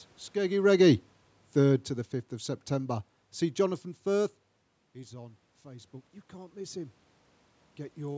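Speech, recorded through call-style microphone processing with nothing above 8 kHz and some room noise in the background. There are two automatic gain control faults. The first is automatic gain falling, from 0.36 to 3.04 s. Right around the half-second mark the talker seems to come closer, so the opening is loud. The gain control reacts by pulling its level down by about 10 dB over roughly two and a half seconds. You can hear the voice and the room noise sink together, which is what gives it away as the gain moving and not the talker. The second is automatic gain rising, from 4.93 to 7.02 s. Just before it, at about 4.5 s, the talker leans away and the input drops by about 16 dB. The gain control then brings the level back up by about 7 dB over around two seconds. The voice and background swell up together, but they don't fully recover to where they were.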